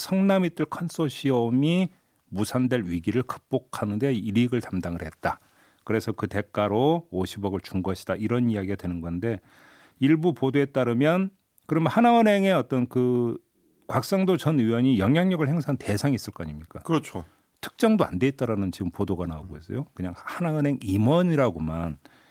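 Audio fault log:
No audible faults anywhere in this speech recording.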